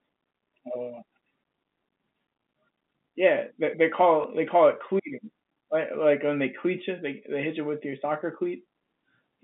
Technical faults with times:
4.22-4.24 packet loss with last packet repeated

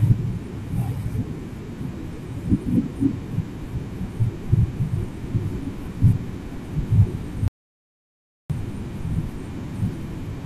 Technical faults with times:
7.48-8.50 audio dropout to silence

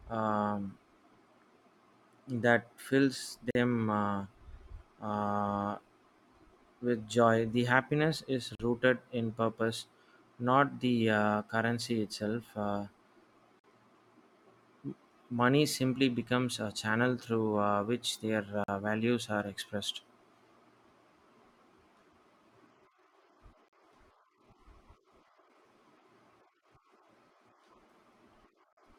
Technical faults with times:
3.51-3.55 gap between chunks
8.55-8.60 gap between chunks
13.60-13.64 gap between chunks
18.64-18.68 gap between chunks
23.68-23.73 gap between chunks
28.73-28.77 gap between chunks

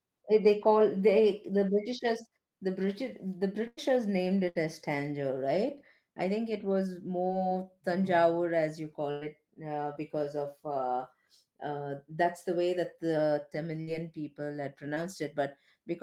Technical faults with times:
3.67-3.79 burst of packet loss
4.49-4.57 burst of packet loss
7.27-7.31 short concealed packet loss
9.11-9.23 burst of packet loss
9.93-9.97 short concealed packet loss
13.81-13.89 burst of packet loss
14.95-14.98 short concealed packet loss

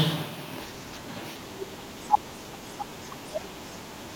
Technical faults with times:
2.06-2.19 loud pop

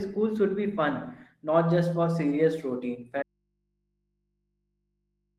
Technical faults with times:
3.23-5.39 audio dropout to a faint residue

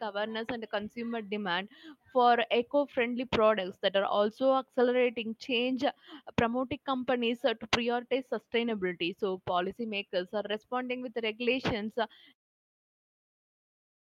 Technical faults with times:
none

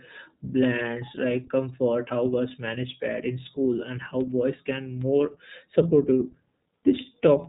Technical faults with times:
0.00-7.49 iLBC codec

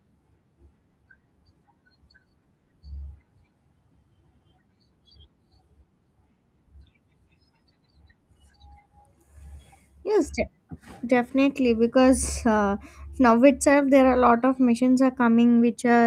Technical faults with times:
13.29 lost packet rebuilt from error correction

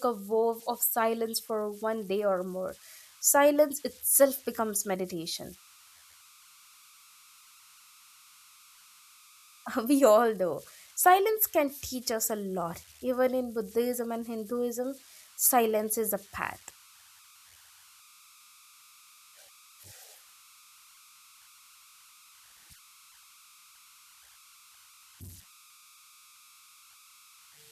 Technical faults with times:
0.00-27.72 converter idle tones

